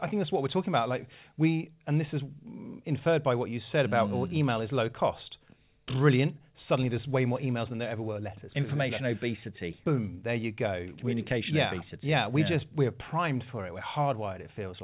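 No technical faults can be heard in the speech.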